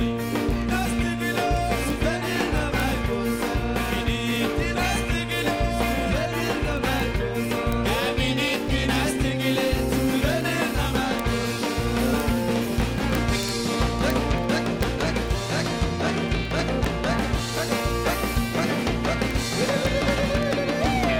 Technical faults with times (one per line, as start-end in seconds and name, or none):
0.11-21.15 word clock ticks